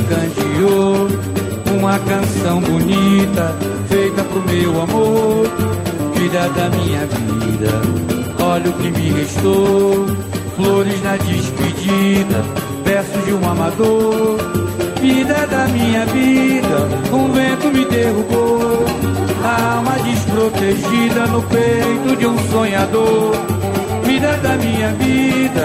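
Running the whole way through there's USB whine, a steady high tone sitting at 8 kHz, roughly 25 dB under the audio. That pitch fits current drawn in 125-microsecond microframes leaking into the power or ground, so it never moves.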